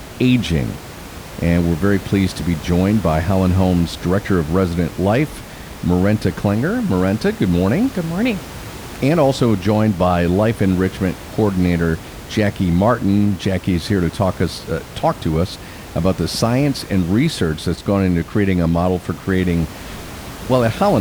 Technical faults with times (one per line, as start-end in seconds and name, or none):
none